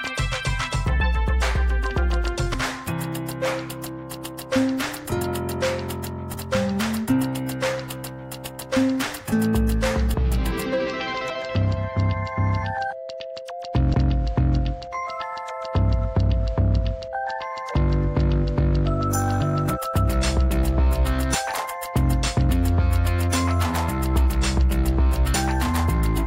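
At 6.34, 21.54 and 25.34 s the sound skips forward. About a fifth of a second drops out each time, and the two sides are butted together with no gap. This is audio missing between chunks, likely from a recorder handling 4-second blocks and losing material at each changeover.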